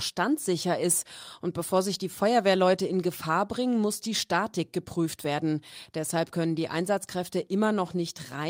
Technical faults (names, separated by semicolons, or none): none